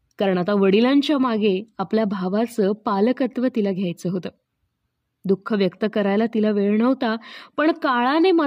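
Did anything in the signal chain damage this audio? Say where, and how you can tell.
No, nothing in the chain from capture to playback has left an audible mark on this speech recording. Every stage appears to have passed the signal along intact.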